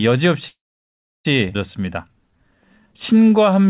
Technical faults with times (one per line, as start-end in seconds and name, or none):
0.48-1.26 call audio freeze
1.54 skip ahead
1.80-3.68 jitter buffer slow-down